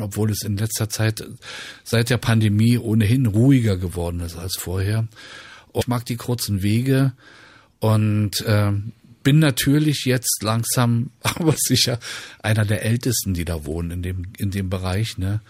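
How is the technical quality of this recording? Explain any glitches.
There's one glitch worth flagging. At about 5.80 s the speech jumps ahead with a tiny blip, landing on "mag die kurzen". That's most likely a stream segment skipped: one chunk of the stream failed to load, the player carried on with the next, and that stretch of audio is simply gone.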